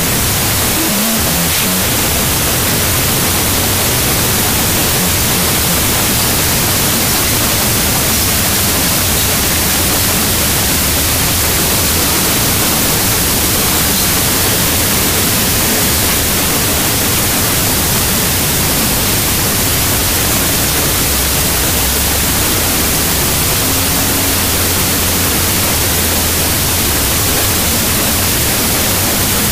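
From start to finish, the audio suffers from a wrong sample width. The data were stored in one sample format and read back in a narrower one. The pattern fits 32-bit float samples being read as 16-bit integers. Each original sample is split into two values, so playback runs at half speed, an octave low. Most values come from mismatched bytes, giving loud, harsh noise with the distorted original buried underneath.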